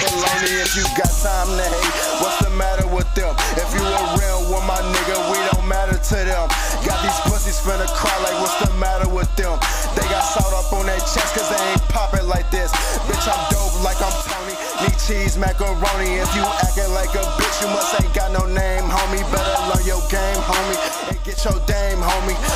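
From 14.22 to 14.78 s and again from 20.88 to 21.38 s, the level falls abruptly by about 6 dB and then recovers, most likely one channel dropping out. Unlike a gain dip, material unique to one side vanishes entirely.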